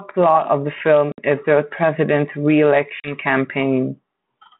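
At 1.12 s, between "of the" and "is the", a hole of about 60 ms opens, and at 3.0 s a shorter one of about 40 ms follows. This is packet loss on an ADPCM call: a few packets vanish and are filled with silence. The decoder's adaptive predictor and step size then lag the sender's, so the sound resumes with brief distortion that settles by about 1.20 s and 3.15 s. A waveform shows flat, hard-edged gaps; a spectrogram shows blank vertical stripes.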